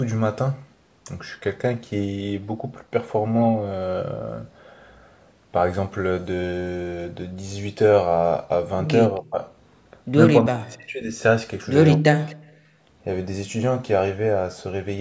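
From 9.15 to 9.2 s a faint delayed copy of the speech, about 271 ms late and roughly 40 dB down, is heard, likely an echo leak past the far end's echo canceller. The speech then dips deeply, by roughly 40 dB, at 9.19 to 9.42 s, 10.44 to 11.13 s and 11.97 to 12.5 s. This is likely speech suppressed in double talk, with the canceller turning down the near talker while the other side is active. At 12.78 to 12.84 s the background is gated by the echo canceller, dropping about 9 dB for roughly 70 ms before returning.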